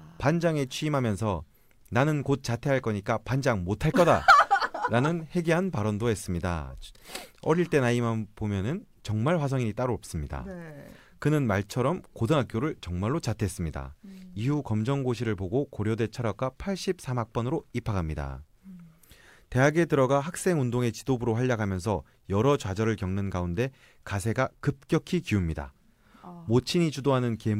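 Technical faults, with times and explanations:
No technical faults are audible anywhere in this speech recording.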